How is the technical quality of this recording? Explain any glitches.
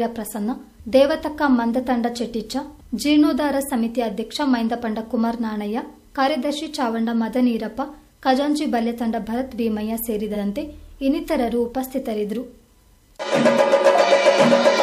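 There is one glitch. At 10.34 to 10.38 s, repeated frames: a 46.4 ms block plays twice, causing a brief stutter. Unlike a dropout, nothing is lost; the clip gains 46.4 ms.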